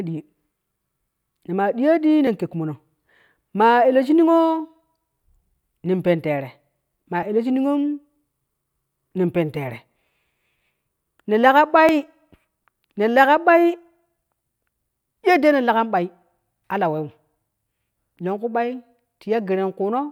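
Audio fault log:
2.27 s, 7.23 s and 11.89 s: three tiny forward jumps in the speech, most likely a dropped buffer (overrun), where the samples weren't collected before the hardware overwrote them, so that slice vanishes and the two sides butt together with no gap. The first two lose just a few milliseconds and the one at 11.89 s loses a bit more, around 7 ms.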